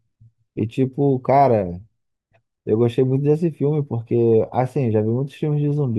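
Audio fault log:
Nothing stood out on listening to this speech recording.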